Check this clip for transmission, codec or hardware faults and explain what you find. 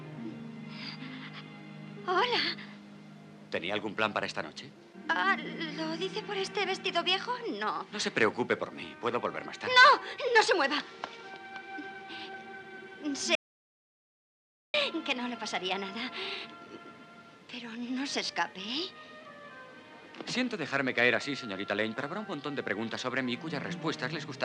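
There is one fault, an audio dropout to silence, from 13.35 s to 14.74 s. The sound cuts off abruptly mid-flow and the track falls to silence, with no room tone or noise floor underneath, before resuming just as suddenly about 1.39 s later. Whatever occurred in that stretch is simply missing. The likely cause is a brief loss of the input signal, such as a disconnected device or failed link, while recording continued and wrote silence.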